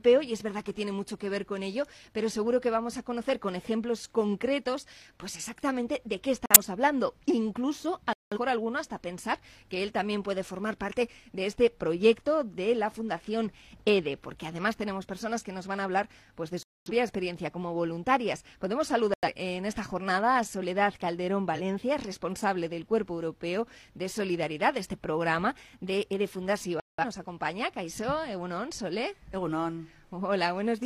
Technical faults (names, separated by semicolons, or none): corrupt frame muted; corrupt frame decoded